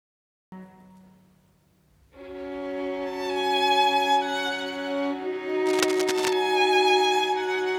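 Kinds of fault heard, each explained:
Cut-off start: The audio opens with digital silence until 0.52 s. The sound then appears abruptly, already in progress, with no natural attack or fade-in. This points to the recording or stream beginning late and missing the start of the sound.
Cable scratch noise: From 5.66 to 6.33 s, dense, uneven bursts of scratching and rustling sit over the sound, nearly as loud as the sound itself. This is likely a worn cable, connector or control being moved, its contact resistance changing rapidly.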